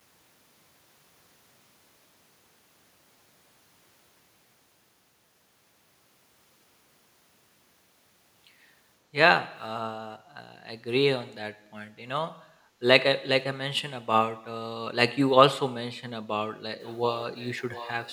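Background gated by the echo canceller at 12.47 to 12.81 s in this speech recording: the room sound behind the talker sinks by about 9 dB for roughly a third of a second, then comes back. The echo canceller evidently judged that loudspeaker playback was under way and turned the microphone down hard to keep it from being sent back, so the ambience dips briefly and recovers once the canceller releases. An echo leak follows from 16.8 s to the end: a faint second copy of the speech trails the original by 713 ms, sitting roughly 20 dB below it. The likely cause is a far end playing the call over a loudspeaker, where that side's echo canceller failed to remove everything its microphone picked up and returned the leftover down the line as a delayed, quieter duplicate.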